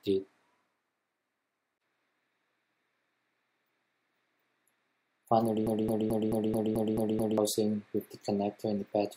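It's a short audio clip with a broken-record loop from 5.67 to 7.38 s: a 0.22 s fragment repeats exactly eight times back to back, and whatever should have played there is lost. That's likely a stall in the player, encoder or stream, which kept resending its last fragment.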